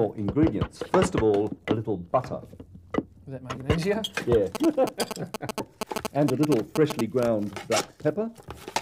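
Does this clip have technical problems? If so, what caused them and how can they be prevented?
Yes. From 4.55 to 7.23 s there are GSM signalling bursts: a galloping dit-dit-dit of short 217 Hz buzzes, roughly as loud as the wanted sound, from a nearby 2G phone whose bursts the audio circuit rectified. Keep phones away from the recording chain or switched off.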